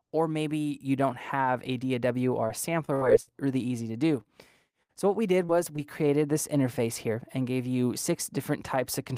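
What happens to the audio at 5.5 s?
At 5.45 to 5.50 s there is a brief smear, a short stretch where the sound wobbles and blurs rather than carrying on cleanly. This is short concealed packet loss: about 40 ms of audio failed to arrive in time, and the receiver covered the gap with roughly 36 ms of synthesized fill, extending the preceding sound before crossfading back into the real signal, which leaves an artificial patch.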